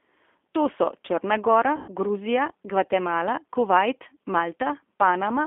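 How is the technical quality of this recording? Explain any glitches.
The recording is limited in quality: the speech carries plainly audible low-rate codec damage throughout, and one short dropout is covered over partway through.

G.729 codec: The speech sits in a narrow telephone band of roughly 250 Hz to 3.5 kHz, with a rough, slightly synthetic texture. That fits an 8 kbit/s G.729A coder rebuilding each frame from a vocal-tract filter, a pitch predictor and a few pulses. Unlike simple band-limiting, the voice itself sounds artificially reconstructed.

VoIP packet loss concealed by the speech codec: From 1.76 to 1.90 s, about 120 ms of audio was lost. The decoder filled the gap by repeating its last pitch and filter settings at falling gain, so the speech stretches into a fading buzzy tone or coloured noise instead of cutting to silence. Because each frame builds on the previous one, the speech stays weak or distorted briefly after the gap.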